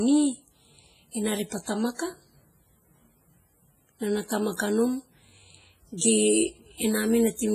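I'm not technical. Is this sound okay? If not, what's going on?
No. Throughout the clip the speech sounds watery and ringing, with a hiss that swells and fades along with the voice. This is heavy compression damage, most likely from WMA compression, which throws away fine detail and smears what remains. Unlike plain background noise, the hiss moves with the speech.

Around 5.98 to 6.01 seconds there is pre-echo: a brief hiss arrives just before a sharp sound, and the attack itself sounds softened. It's a smear of about 36 milliseconds that comes before the sound rather than trailing after it like an echo.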